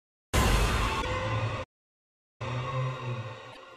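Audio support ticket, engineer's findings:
Short garbled glitches with a skip forward at 1.01 to 1.05 s and 3.52 to 3.57 s. Likely a broken MP3 bit reservoir: after lost 26.1 ms frames, the following frames decode with data borrowed from the wrong frame until decoding resynchronises.

Sound cuts to silence mid-flow from 1.63 to 2.42 s, a gap of about 763 ms, then resumes. Likely a playback stall: the player's buffer ran dry or its thread was blocked, leaving no output until it recovered.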